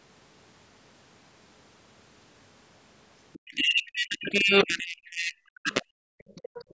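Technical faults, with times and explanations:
Throughout: low bit depth without dither. The speech is coarse and gritty, with distortion that tracks the signal and is nearly as loud as it. This is likely from rounding to about 3 bits with no dither, so quiet passages crumble or collapse between steps.
3.33–3.55 s, 3.85–3.91 s, 5.05–5.10 s, 6.28–6.64 s: other side's voice leaking through. Faint scraps of a second voice, very low under the speech and strongest in the last stretch. These are likely loudspeaker echo that the echo canceller failed to remove fully from the microphone.
3.41–6.11 s: speech suppressed in double talk. Over about two seconds of this span the speech repeatedly dips and breaks up, at its deepest by around 40 dB. The likely cause is the echo canceller confusing the talker with the overlapping far-end echo and attenuating both.
6.64 s to the end: background gated by the echo canceller. 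The room sound drops by about 22 dB for roughly 100 ms right after the last echo burst, as the canceller clamps the microphone while the loudspeaker is active.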